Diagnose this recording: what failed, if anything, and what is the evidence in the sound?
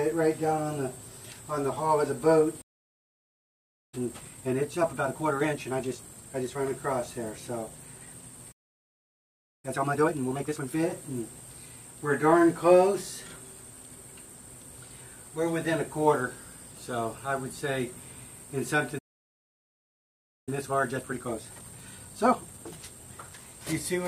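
The sound cuts out three times in mid-flow: 2.61 to 3.94 s (about 1.3 s), 8.51 to 9.65 s (about 1.1 s) and 18.98 to 20.49 s (about 1.5 s). These are playback stalls at the player's buffer stage, likely from the output buffer running dry or the playback thread being blocked. On the waveform each shows as a flat line. On a spectrogram each is a blank vertical band with hard edges on both sides.

Each stall is followed by a time-compressed catch-up, in which the player shortens its backlog. The audio runs at 1.5 times normal speed from 3.94 to 6.56 s, at 2 times from 9.65 to 10.75 s, and at 1.5 times from 20.49 to 23.45 s. Pitch stays normal, but the sound is hurried because short pieces are cut out and cross-faded. On a spectrogram, harmonic lines keep their frequencies while events crowd closer together, with splice discontinuities. On the waveform, envelopes look compressed in time.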